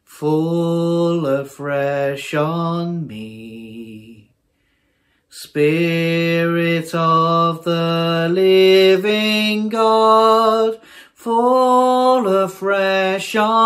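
No technical fault can be heard anywhere in the clip. The sound runs without dropouts, clicks, distortion or interruptions.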